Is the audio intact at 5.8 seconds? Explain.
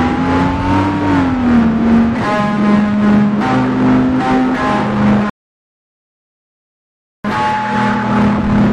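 No. At 5.8 s the music has stopped dead and there is only silence, part of a gap that runs from 5.30 s to 7.25 s before the music picks up exactly where it broke off. This is a rebuffering stall: the player used up all the audio it had downloaded and paused until more arrived. No music is lost, but about 1.95 s of silence is inserted into the timeline.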